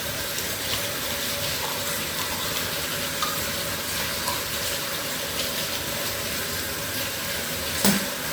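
Throughout the clip, the audio has likely passed through an MP3 encoder and decoder a few times over, about three generations, each at a rate that fits 96 kbit/s. Every pass requantises the signal on a shifted frame grid, so the coding noise and spectral gaps stack up. The result is generation loss: a swirly, hollow, smeared texture beyond what a single encode at that rate would give, with softened attacks. The band still reaches about 20.1 kHz.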